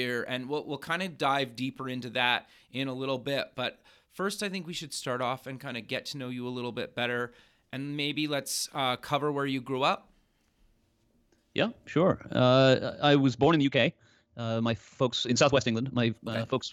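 From 13.32 s, just after "I was", to the end at 16.73 s, a time-stretched section plays about 1.49 times faster at unchanged pitch, likely from software dropping short pieces to shorten it. It sounds rushed, and a spectrogram shows small discontinuities at splice points.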